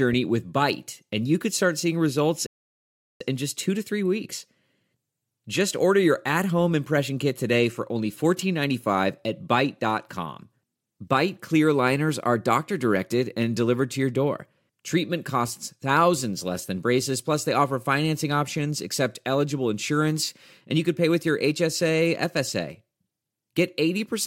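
Speech, interrupted by a rebuffering stall from 2.46 s to 3.21 s. Right after "could start seeing results" the audio drops to silence, then picks up again with "in just two to" at exactly the point where it stopped. The player exhausted its downloaded audio and waited for more to arrive, so no material is skipped. The gap instead inserts about 0.74 s of dead air into the timeline.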